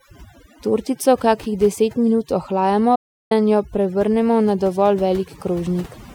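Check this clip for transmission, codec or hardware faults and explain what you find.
Two faults are present: heavy-handed noise reduction across the whole recording, and one broadcast dropout just before the three-second mark.

Overdone noise removal, throughout the clip: a noise reduction stage set far too aggressively keeps pulling individual frequency bands down to nothing whenever their level sits close to its noise estimate. Softer parts of the speech fall below that threshold and get stripped along with the hiss. The background is left almost silent but speckled with twinkling, warbling artefacts.

Digital broadcast dropout, from 2.95 s to 3.32 s: the receiver stopped getting usable frames, whether from lost signal or frames failing their checks, and muted its output until valid data returned. The sound fades out over about 8 ms into a silence of roughly 0.35 s, which fits about eleven consecutive frames being thrown away. 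Whatever was transmitted in that window is gone entirely. Audio resumes with "jo prevrnemo na dovolj".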